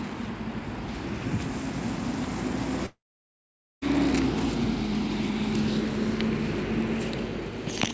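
At 2.86 s the sound breaks off into a brief fading buzz, then silence. It resumes at 3.84 s with a section missing. Likely a long network dropout.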